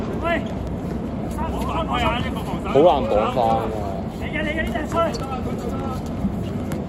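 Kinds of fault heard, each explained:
Word clock ticks: the receiving device reads a digital link on its own clock, not locked to the sender's, and the two drift apart by roughly 100 parts per million. Each time they slip past each other a single sample is dropped or repeated and its neighbours misread, so a sharp tick of uneven strength recurs about every fifth of a second, some thirty in all, from 0.27 s to 6.75 s.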